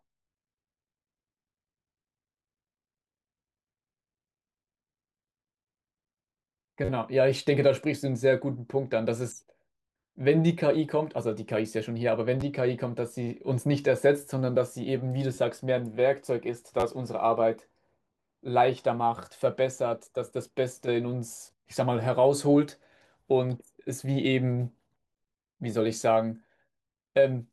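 At 6.85–6.89 s, 12.41–12.43 s, 15.35–15.37 s and 16.80–16.83 s, a repeated buffer is heard: new audio arrived late, so one roughly 11 ms piece, which fits a 512-sample buffer, replays two to four times as a brief buzz. Unlike a dropout, nothing goes silent.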